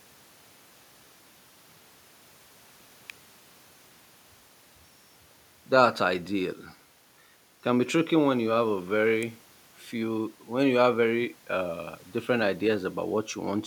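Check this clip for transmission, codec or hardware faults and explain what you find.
There's an electrical switching spike at 3.10 s and again at 9.23 s: sharp little snaps over the speech, likely a nearby switch or discharge arcing into the line.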